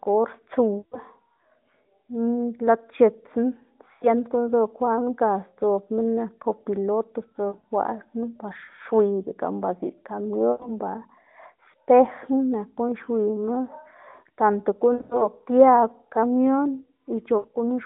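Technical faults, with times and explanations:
0.78–0.99 s, 3.94–4.07 s, 7.49–7.65 s, 10.52–10.70 s, 14.94–15.28 s, 17.38–17.56 s: lost AMR speech frames, 80 to 140 ms each. The decoder repeats its last pitch and vocal-tract settings at falling gain, so the sound smears, fades, then returns rough.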